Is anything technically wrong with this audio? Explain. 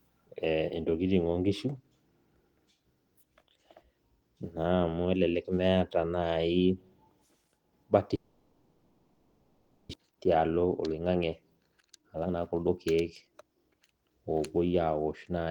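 Yes. From 8.15 to 9.95 s the speech dissolves into a fading concealment buzz with about a second of audio never returning, likely a long network dropout that left the receiver filling the gap. From 10.08 to 13.81 s the speech runs hurried at 119% speed with unchanged pitch, a jitter buffer speed-up trimming pitch periods to recover roughly 0.7 s of backlog.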